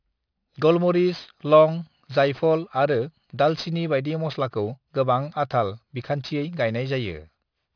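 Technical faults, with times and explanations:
Throughout, aliasing: sibilants sound gritty and metallic, with spectral energy running right up to a hard edge near 5.5 kHz, which fits a drop to an 11 kHz rate without filtering. Content above that edge folds back as unrelated tones roughly 25 dB below the speech, unlike a plain low-pass, which would only dull the top.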